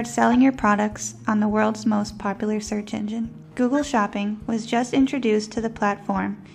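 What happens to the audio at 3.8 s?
A corrupt frame decoded from 3.76 to 3.84 s. For about 80 ms, roughly two compressed frames reach the decoder with damaged bits, and it plays them anyway. Misread gains and codes put energy at frequencies where it doesn't belong, so the sound breaks into a short, unnatural blip or burst that peaks at around -20 dBFS. It ends as soon as clean frames resume after 3.84 s.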